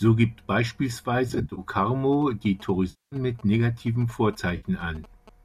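From 1.29 to 1.60 s, AAC frame loss with concealment breaks up the speech: about 160 ms of audio goes missing in short runs of roughly 30 ms or less, scattered across 280 ms. The decoder patches each gap from the last good spectrum, so the sound turns smeared and phasey. On a spectrogram, the harmonics blur into noisy, flattened blocks.

GSM signalling bursts run from 2.13 to 5.29 s, about 25 dB below the speech. A nearby 2G phone's radio pulses are rectified by the audio circuit into a galloping dit-dit-dit of brief buzzes at 216.7 Hz. The waveform shows clusters of sharp spikes. The spectrogram shows short stacks of horizontal lines at 217 Hz harmonics.

The concealment returns at 2.90 to 3.16 s, with a 220 ms loss filled in from the last good spectrum. A short 60 ms dropout at 4.57 to 4.66 s leaves a brief smeared patch. The lost frames likely come from a low-delay AAC-ELD stream.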